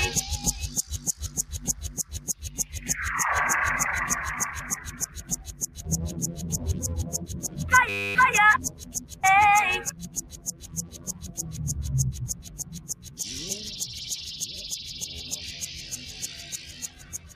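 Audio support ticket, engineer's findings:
Noise suppressor applied to music or sounds, full clip. Level swings by around 15 dB as sustained content is treated as noise. Onsets pass, held tones and tails sink. Result is pumping and a thinned, fluttering body. Probable component: speech-tuned suppression stage left active on non-speech material. Gain tracks the signal's steadiness, not noise.

Sound cut by the noise suppressor at 1.98–2.74 s, 4.99–5.83 s, 8.70–9.23 s, 9.90–11.40 s, 12.33–13.19 s and 16.70 s to the end. Drops of about 10 dB. Sustained and decaying portions dip hard, and decays are truncated early. Transients stay largely intact. Same suppressor. Classifier misreads steady energy as noise floor and attenuates it. The longest hit runs about 1.5 s.

System hang loop, 7.89–8.15 s. Steady buzz at 100 Hz. One 10 ms slice repeats exactly, roughly 26 passes. Around 0.3 s of real audio is lost. 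Probable component: host or driver stall while the audio hardware kept replaying its ring buffer. The loop length points to a very short buffer, hence a tone rather than a stutter.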